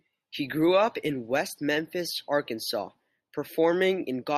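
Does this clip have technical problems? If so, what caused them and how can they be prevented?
No, there are no technical problems in this recording. Nothing in the audio points to a fault, so there is nothing to trace back to a cause or to prevent.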